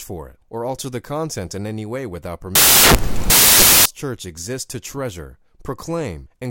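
From 2.55 to 3.86 s the speech gives way to samples built from the wrong bytes: each value is assembled with its bytes misordered or misaligned, so the rapidly changing low-order bits dominate. The result is loud broadband noise in place of the signal.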